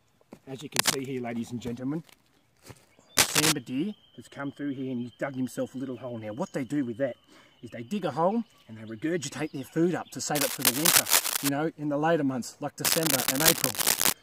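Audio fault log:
0.76–0.95 s, 3.17–3.52 s, 10.35–11.49 s, 12.85–14.13 s: cable scratch noise. Dense, ragged bursts of scratching and rustling sit over the sound, somewhat louder than it. This is likely a worn cable, connector or control being moved, its contact resistance fluctuating rapidly and injecting uneven noise.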